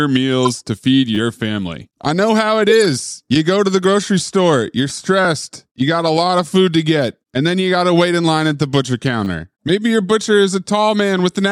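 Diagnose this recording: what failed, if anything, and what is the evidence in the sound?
Corrupt frame decoded, at 0.43 to 0.53 s and again at 2.70 to 2.82 s, in the codec stage. Each event is a loud chirp-like burst. Damaged bits across several compressed frames were decoded anyway, so misread gains threw energy into the wrong frequencies.

Repeated buffer, at 1.15 to 1.17 s, 5.25 s and 9.25 to 9.27 s, in the driver or buffer stage. The speech briefly buzzes as the same 10 ms slice sounds two or three times with hard joins. When fresh audio arrived late, the device replayed its last buffer.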